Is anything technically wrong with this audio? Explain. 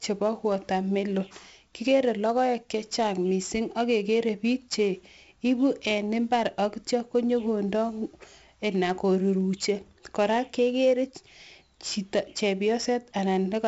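Yes. The speech carries 4-bit ADPCM compression from start to finish. This scheme codes each sample as a small step away from a predicted value, adjusting the step size as it goes. Here the damage is heavy. A gritty hiss rides on every loud syllable and rises and falls with the speech level. Sharp onsets sound distorted because the step cannot grow fast enough. Nothing is heard above about 7.7 kHz, which points to a roughly 16 kHz sample rate and dulls the sound.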